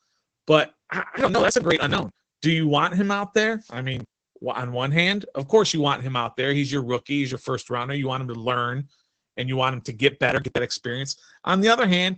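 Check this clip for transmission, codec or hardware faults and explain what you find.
Two faults are present: coding damage throughout and three bursts of crackle.

Opus voice compression, throughout: a SILK-style coder at low rate, which fits about 12 kbps, cuts everything above 8.5 kHz and coarsens detail, leaving speech muffled, hoarse and faintly robotic.

Processor overload crackle, 1.17–2.35 s, 3.94–4.33 s (between "him out there I" and "on one hand of"), and 10.29–10.58 s (after "want him to get"): buffers of roughly 10 ms missed their deadlines repeatedly and were skipped, leaving hard-edged gaps heard as gritty tearing.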